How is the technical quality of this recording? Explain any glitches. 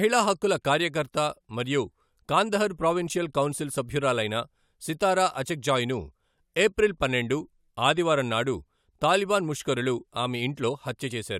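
Listening through the recording, nothing stood out as a technical problem, so there are no glitches to explain.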